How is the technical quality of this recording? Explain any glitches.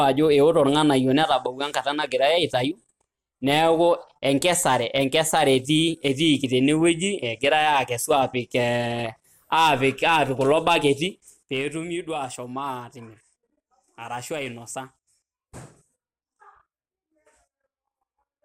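The recording has two kinds of glitch: brief patches of DAB burbling and one stretch of zipper noise during a level change.

From 8.93 to 9.06 s, and again from 10.56 to 10.80 s, the speech picks up short blips of noise in parts of the spectrum. This is DAB burbling. Weak reception let bit errors slip past the error correction into the MP2 audio data, which points to a modest error rate of around a tenth of a percent. Corrupted samples put short blips of noise into single sub-bands.

Between 11.26 and 11.80 s, while the level drops by roughly 10 dB, a fast ticking or zipping rides on the speech at roughly 15 clicks per second. This is zipper noise. The gain was changed in hard 2 dB steps with no smoothing between them, so each jump left a small discontinuity in the waveform that is heard as a click.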